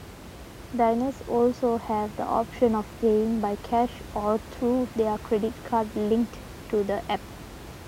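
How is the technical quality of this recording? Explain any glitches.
No glitches can be heard anywhere in this speech recording. A background noise from the room sits about 17 dB below the speech and belongs to the recording space, not to the system.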